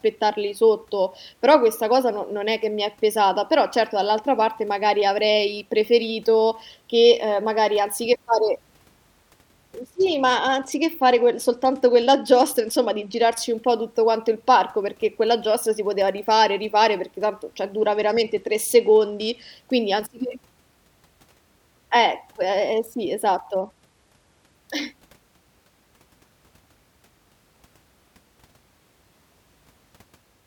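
At 9.82 to 13.38 s, 17.78 to 19.52 s and 23.61 to 24.55 s the speech turns dull and gritty, a Bluetooth SBC bit pool drop that sounds like a fall from bit pool 28 to about 12 (near 96 kbps), starving upper sub-bands. A spectrogram shows the treble abruptly cut away, with grainy noise below.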